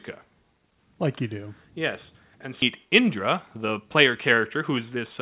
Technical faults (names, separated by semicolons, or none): skip ahead; jitter buffer speed-up